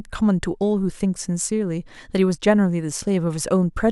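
Nothing here stands out as a technical fault; the speech carries on without any audible glitch or interruption.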